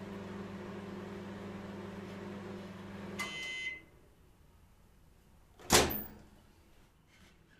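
A clip of everyday sound has digital radio blending to analogue from 2.52 s to 7.26 s. The receiver cross-fades over 460 ms to the FM broadcast, adding hiss roughly 40 dB down at unchanged level. A spectrogram shows a faint noise floor.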